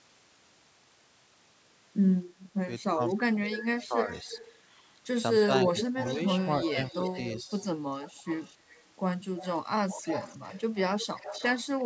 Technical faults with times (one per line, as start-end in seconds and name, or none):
2.93-4.08 speech suppressed in double talk
3.08-4.61 echo leak
5.46-7.17 speech suppressed in double talk
5.78-8.83 echo leak
9.37-11.84 echo leak